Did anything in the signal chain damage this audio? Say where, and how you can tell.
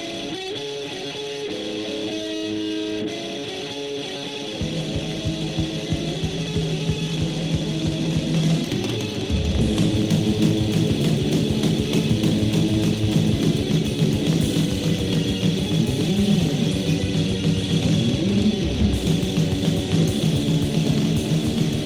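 No, nothing damaged this audio.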